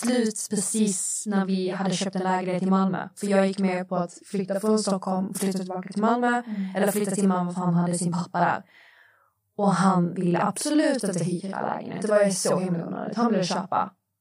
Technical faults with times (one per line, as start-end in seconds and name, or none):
0.00-14.21 channel delay (doubling)